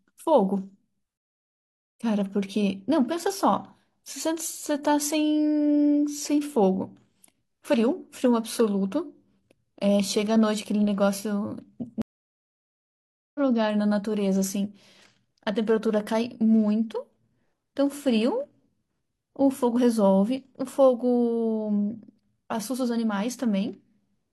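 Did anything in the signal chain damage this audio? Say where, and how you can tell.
Yes, a network problem: two stream reconnects. The speech goes silent at 1.17–1.95 s and again at 12.02–13.40 s. Each time it picks up further along, about half a second and then about a second later. The connection dropped, and the player rejoined mid-stream with a fresh decoder.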